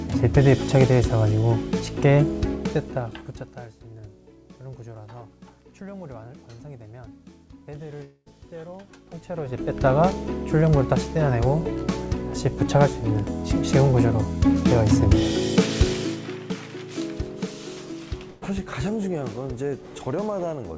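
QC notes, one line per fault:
8.04–8.28 s, long network dropout: the sound breaks off and the last moment before the break is drawn out as a buzzy, fading continuation for roughly the first 160 ms. About 60 ms of near-silence follows before the audio picks up again further along. Around 220 ms of material never returns. This pattern is likely a stretch in which no packets reached the receiver, so it stretched out what it last had and then gave up.
18.30–18.43 s, burst of packet loss: a shorter gap of about 120 ms, in which a run of consecutive packets was lost or arrived too late to play. The receiver filled roughly 114 ms by repeating the preceding sound at a falling level, heard as a brief held buzz or hiss that fades out. There is no silent stretch. Playback resumes past the missing piece, so the sound jumps forward slightly at the rejoin.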